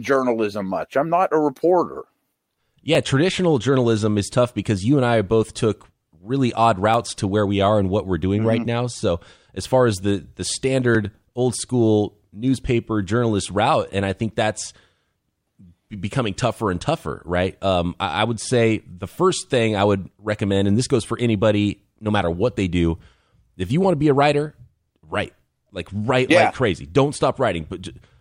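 Speech, and there's an overlap between stream segments showing up as tiny skips at 2.95 s (just before "traditional journalism is tough"), 6.94 s (between "both took really odd" and "to where we are") and 10.95 s (between "far as the the" and "old school newspaper journalist"). They land about 4 s apart, so segment boundaries with overlapping timestamps are getting trimmed, dropping roughly 15 to 18 ms of real audio and making the waveform jump.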